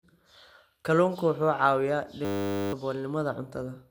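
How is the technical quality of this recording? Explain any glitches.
The recording is speech with two clear problems: a degraded, smeared tone throughout and a brief buzzing freeze near the end.

Generation loss runs the whole way through. The sound is swirly and hollow, consonant attacks are blurred, and nothing sits above 16.7 kHz. The likely cause is repeated lossy re-encoding, around ten passes, consistent with MP2 at 128 kbit/s. Each pass quantised on a shifted frame grid, so the damage compounded.

A system hang loop occupies 2.25 to 2.73 s. A steady 100 Hz buzz replaces the speech because a single 10 ms slice of audio repeats 48 times while the system stalled and the sound hardware kept replaying the same buffer. Roughly half a second of speech is lost.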